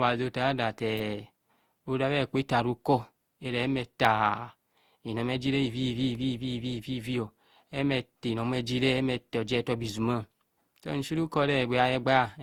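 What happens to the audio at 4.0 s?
At 4.05 s an electrical switching spike cuts in: a sharp snap over the speech, most likely a nearby switch or discharge arcing into the line. On the waveform it is a near-vertical needle about 2 ms wide; on a spectrogram, a thin full-height vertical stripe.

Around that moment, and throughout, the speech carries generation loss. It sounds swirly, hollow and smeared, with softened attacks, which points to likely re-encoding about seven times with a codec like Opus at 64 kbit/s. On a spectrogram, blurred transients show across the band.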